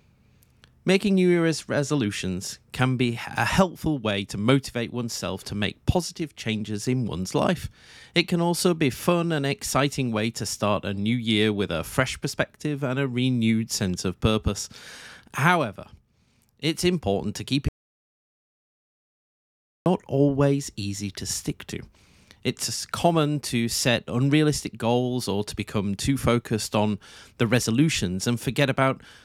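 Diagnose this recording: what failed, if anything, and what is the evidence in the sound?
The speech drops out to dead silence at 17.68 s and comes back at 19.86 s, so about 2.18 s is simply gone, with no room tone underneath. That's an audio dropout to silence, likely the input link or capture device losing signal while the recorder kept writing silence.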